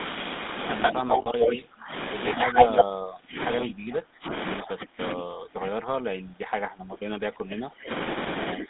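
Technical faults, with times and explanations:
Throughout: GSM full-rate codec. Regular-pulse coding, consistent with 13 kbps GSM full rate, limits the line to 200 Hz to 3.7 kHz and gives a plainly buzzy, gravelly roughness.
0.82 to 1.55 s and 2.26 to 2.84 s: echo leak. Likely an incompletely cancelled loudspeaker echo returns 128 ms late. It is about 5 dB louder than the talker at first, then about 10 dB louder.
0.92 to 1.91 s, 2.46 to 7.9 s and 8.54 s to the end: speech suppressed in double talk. The canceller likely turned down its own talker along with the loudspeaker echo during overlapping talk, so the voice dips deeply, by up to around 30 dB.
1.22 to 1.28 s: lost GSM frames. About 40 ms, consistent with two frames, was filled by repeating the last good frame, giving a brief rough, metallic hold.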